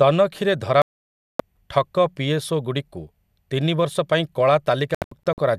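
At 0.82 s the speech drops out completely until 1.40 s, a digital broadcast dropout where the receiver muted on bad frames. Then from 4.95 to 5.38 s it breaks into short holes, the longest about 72 ms, losing around 0.2 s of speech.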